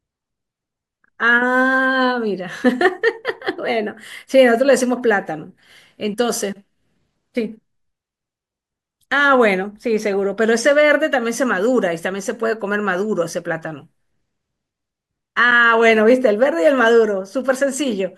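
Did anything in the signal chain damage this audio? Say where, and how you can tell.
No, nothing in the chain did.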